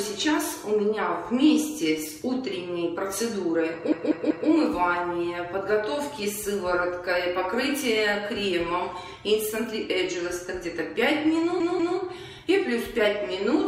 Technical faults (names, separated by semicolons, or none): repeated frames